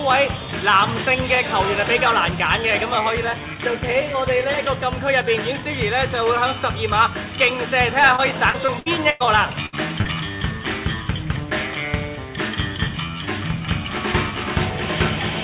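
From 8.16 to 9.22 s there is repeated packet loss, giving a choppy, robotic sound. Five separate gaps totalling about 240 ms are patched by extending the preceding sound, the longest lasting 103 ms. Roughly a quarter of that stretch is synthetic fill, so the audio turns choppy and broken.

At 9.66 to 9.77 s a burst of packet loss removes about 60 ms. The receiver holds and fades the last sound for about 65 ms, heard as a held buzz or decaying hiss. Playback then resumes slightly ahead, skipping roughly 13 ms of the original.

From 10.01 to 10.07 s a short concealed packet loss of 40 ms is bridged by continuing the prior sound and crossfading back in. It comes across as a brief smear or wobble. The band-limited path, with nothing above 4 kHz, fits G.711 A-law coding.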